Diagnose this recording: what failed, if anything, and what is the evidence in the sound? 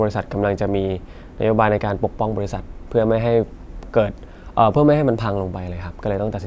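Nothing in the chain has failed: the speech signal arrives intact and continuous, with no audible fault at any stage.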